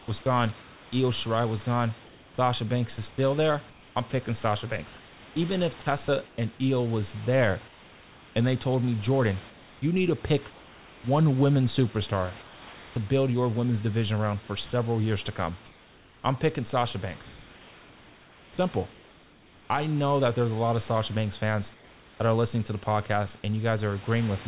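From the start to about 11.04 s the speech is chopped by the voice detector, most likely a detector flipping between sending and muting. Roughly 3.3 s in total gets swapped for comfort noise, so quiet syllables and word edges drop out.

Comfort noise then replaces the background in four pauses: 12.42–12.96 s (between "one women superstar" and "build your women's division"), 15.66–16.24 s (after "several years to come", before "I'm picking"), 18.92–19.7 s (just before "know that there's a") and 21.74–22.2 s. The room tone turns flat and featureless and dips by about 2–4 dB.

At 19.7 s and 22.2 s the onset is clipped by the voice detector, with about 20 ms missing each time. The detector was probably slow to wake, so the speech starts abruptly without its soft lead-in.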